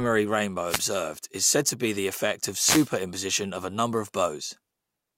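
A speech recording with two wireless microphone noise hits. The first is a brief swish of static from 0.68 to 0.80 s, just before "is said to be". The second is longer, from 2.58 to 2.90 s, right after "be the effect of". Each is a moment where the radio link from an analogue FM microphone dropped into a fade. Reflected signals cancelled the direct one, so receiver noise rose.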